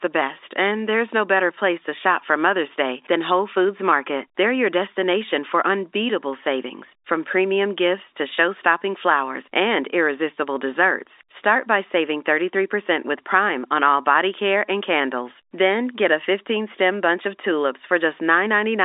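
No faults found: the speech sits in an ordinary telephone band of about 300 Hz to 3.7 kHz with nothing above 4 kHz, consistent with a normal G.711 A-law line at 64 kbit/s.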